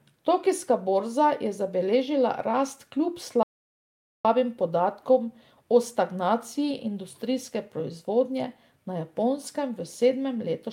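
At 3.43 s the speech cuts out in a playback stall lasting about 0.82 s, until 4.25 s. The player likely ran dry of data. Speech then resumes.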